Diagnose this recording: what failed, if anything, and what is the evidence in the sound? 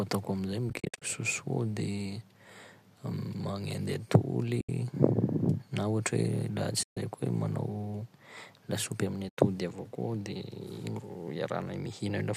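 The network-to-decoder stage failed, with AAC frame loss and muting. Soft-edged holes appear at 0.70–1.02 s (a cluster of short gaps), 4.61–4.69, 6.83–6.97 and 9.29–9.37 s. The decoder zeroes missing frames, and overlapping windows fade across each gap.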